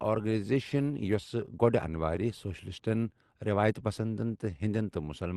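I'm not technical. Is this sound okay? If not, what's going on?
No. From about 0.22 s to 5.02 s the speech drags slightly, running at roughly 97% of its proper pace, with small stumbles where tiny bits seem to repeat. These are repeated timing corrections: the receiving end keeps padding the audio, adding about a fifth of a second overall.

The root cause is clock drift between sender and receiver. The sending device's clock runs roughly 4% slow, so sound arrives too slowly, and the call's buffer keeps running low. It stretches and repeats short pieces to avoid going silent.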